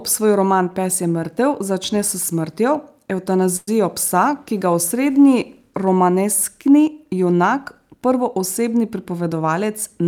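At 3.56 s the speech stalls for about 0.12 s. The last sound is held on as a brief buzzy smear that dies away, with roughly 10 ms of near-silence at the end, and the speech then resumes where it left off with nothing skipped. This is a call audio freeze, likely caused by packets held up in transit so the jitter buffer ran dry. The receiver padded about 110 ms with continued sound, adding that much delay.

From 8.83 s to 10.01 s the speech sounds slightly hurried, running about 6% fast while the pitch stays unchanged. This is a jitter buffer speed-up. Having accumulated more audio than its target, the receiver trimmed tiny slices of one or a few pitch periods again and again to shrink the backlog. In total something like 70 ms was cut across that stretch, which gives the rushed, clipped pacing.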